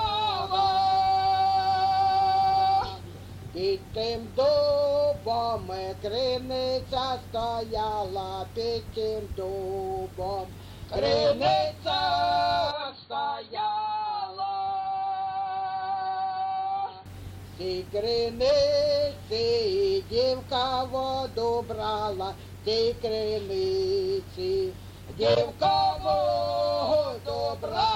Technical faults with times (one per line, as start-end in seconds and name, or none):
12.71-17.06 input switched to a poorer device